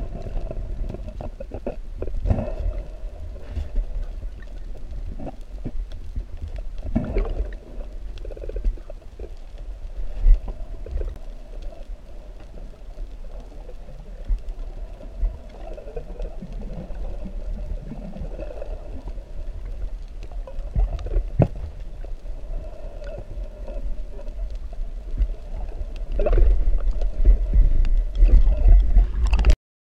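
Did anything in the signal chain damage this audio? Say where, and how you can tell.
Yes. The converter's clock suffers periodic clock jitter throughout, at a rate of around 2 kHz. Every component of the sound gains sidebands spaced about 2 kHz above and below it, strongest on high-frequency content, giving a rough, metallic edge that disappears whenever the signal falls silent.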